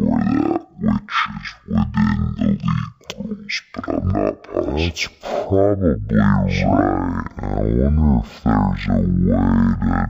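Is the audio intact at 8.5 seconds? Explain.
No. At 8.5 seconds the speech is affected by stereo read as mono, a fault that runs through the whole recording. Left and right samples were taken in turn as one channel, so the audio plays at half speed and 12 semitones low. On a spectrogram the speech harmonics sit an octave lower, with a fainter mirrored copy in the upper half of the band. The waveform shows each syllable stretched to twice its normal length.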